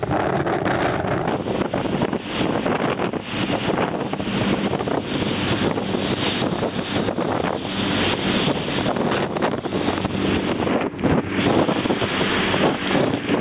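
Aliasing runs throughout: the sound was downsampled without filtering, consistent with an 8 kHz rate, so content above 4 kHz folds back as gritty, metallic tones only about 10 dB down.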